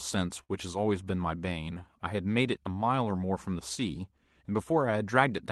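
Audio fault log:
0.43–0.51 s, short stall from a late packet: the jitter buffer ran dry, so sound is held and stretched for 58 ms, then resumes where it stopped. Nothing is skipped, unlike a lost packet.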